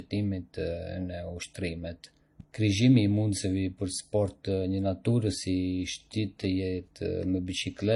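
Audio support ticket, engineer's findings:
Likely transcoding between lossy codecs: an MP3 encode, then HE-AAC on top, which fits roughly 40 then 32 kbit/s. Throughout the speech: nothing above 11.4 kHz. The second encoder spends bits re-coding the first's artefacts and adds its own, so both sets of artefacts are heard together.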